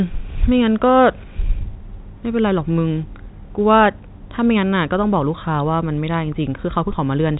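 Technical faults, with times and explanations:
No technical faults are present: the speech travels through G.711 mu-law telephone coding at 64 kbps, which keeps it band-limited with nothing above 3.8 kHz and leaves at most a faint trace of coding damage.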